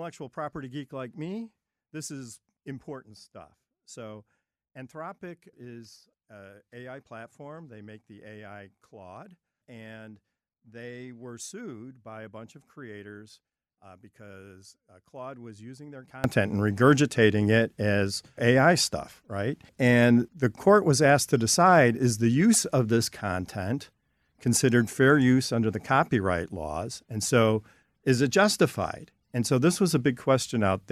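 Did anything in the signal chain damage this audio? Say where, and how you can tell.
Yes. From the start to about 16.24 s the sound drops by about 22 dB and goes faint when heard in mono. That's the signature of one channel inverted: one side's polarity is flipped, so everything common to both channels cancels on the mono sum and only the left-right difference survives. The cause is likely a swapped pair in the analogue wiring, and after 16.24 s the full level comes back.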